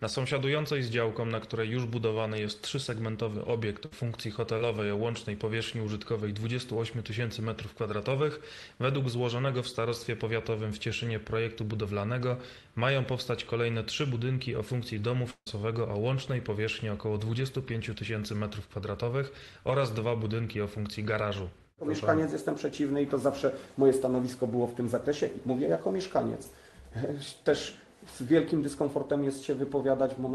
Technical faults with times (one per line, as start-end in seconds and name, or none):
3.85-3.93 burst of packet loss
4.58-4.60 short concealed packet loss
15.30-15.47 long network dropout